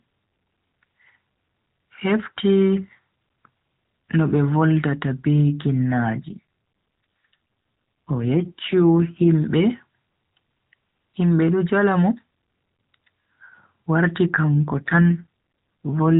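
AMR rate drop at 6.26–9.28 s and from 14.55 s to the end: the narrowband codec likely steps down from 12.2 to 5.9 kbps, making speech buzzier and more synthetic without gaps.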